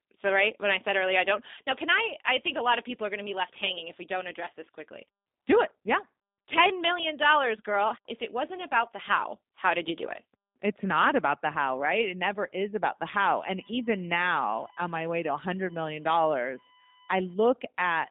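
From start to end the speech carries G.729 codec damage, plainly audible as a rough, slightly synthetic buzz. The codec rebuilds each 10 ms frame from a vocal tract model and a few pulses, and the sound fits 8 kbit/s G.729A. A spectrogram shows energy only from 200 Hz to 3.7 kHz, cut off sharply and empty above 3.8 kHz.

From 13.25 s to 17.33 s a USB whine sits under the speech. Bus current pulsing in 1 ms frames leaks into power or ground, giving a fixed 1 kHz pitch whose harmonics peak at 12 kHz, roughly 25 dB below the speech. On a spectrogram it appears as flat horizontal lines spaced 1 kHz apart.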